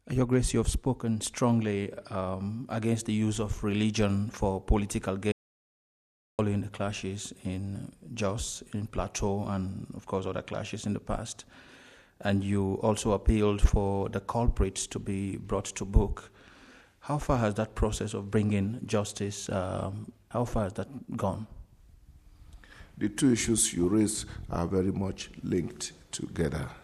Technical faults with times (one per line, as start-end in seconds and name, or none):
5.32-6.39 audio dropout to silence